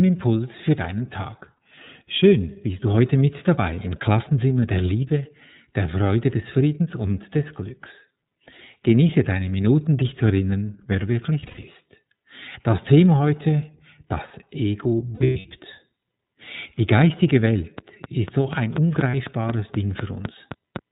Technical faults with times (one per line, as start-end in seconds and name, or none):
0.00-20.92 iLBC codec
1.55-1.58 lost iLBC frames
11.40-11.65 lost iLBC frames
15.14-15.46 lost iLBC frames
17.78-20.77 train of clicks
19.11-19.14 lost iLBC frames